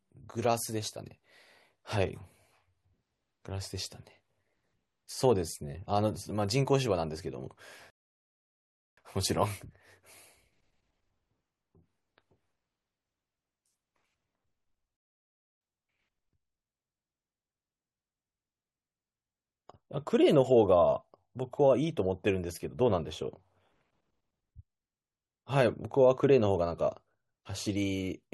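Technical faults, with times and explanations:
7.90 to 8.98 s and 14.97 to 15.61 s, rebuffering stall: the speech drops to dead silence, then picks up exactly where it left off, adding about 1.07 s and then 0.64 s. The player ran dry of downloaded audio and simply waited for more to arrive.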